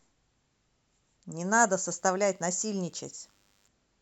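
From 1.68 s to 3.68 s, a DECT cordless phone buzz sits under the speech. A nearby DECT handset or base emits radio bursts 100 times a second. The audio circuit rectifies them. The result is a thin, steady 100 Hz buzz, rich in harmonics, well below the speech level.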